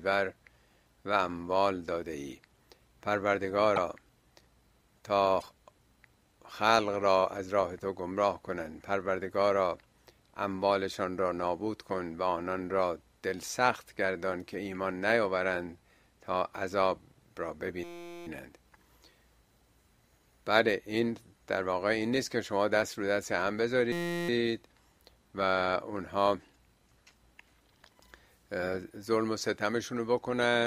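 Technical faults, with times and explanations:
3.75–3.78 s and 5.40–5.44 s, broken MP3 bit reservoir: brief glitches where the audio jumps ahead, likely from frames cut out so following frames decode borrowed bytes from the wrong frame.
17.84–18.27 s and 23.92–24.29 s, system hang loop: a 5.8 ms slice repeats dozens of times, giving a steady 172 Hz buzz, consistent with a 256-sample ring buffer cycling while the system froze.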